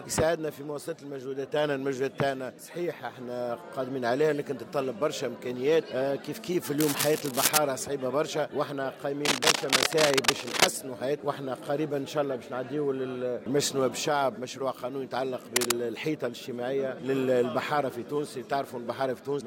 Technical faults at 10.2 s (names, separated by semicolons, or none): cable scratch noise